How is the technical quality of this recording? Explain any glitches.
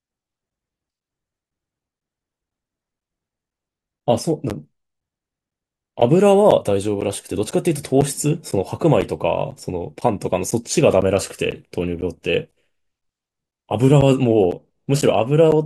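The recording is marred by one recurring fault: periodic USB or driver dropouts. From 0.50 s to 15.52 s, a short gap appears every 0.5 s, roughly thirty times in all. Each gap lasts around 10 ms and is filled with silence. Some background process is stalling the USB link or audio driver on a fixed schedule, so the incoming speech is briefly lost at each stall. The result is a steady ticking or popping that rides along with the speech and is heard only where there is signal.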